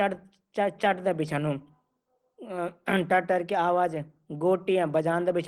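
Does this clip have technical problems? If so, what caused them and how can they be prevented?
Yes. Opus voice compression is plainly audible throughout the speech. The hybrid coder's SILK layer codes the excitation coarsely, so the result sounds hoarse and slightly robotic, which fits a bitrate of around 16 kbps. Encoding at 32 kbps or higher would prevent it.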